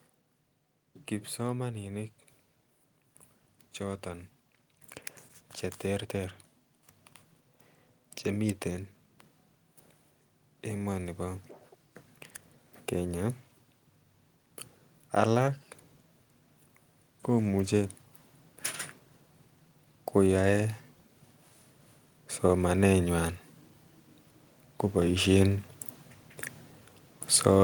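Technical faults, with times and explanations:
1.36–17.96 s and 20.14 s to the end: automatic gain rising. The level control judged the input too quiet and kept nudging its gain up, by about 11 dB over the first stretch, so speech and background noise swell together slowly instead of jumping.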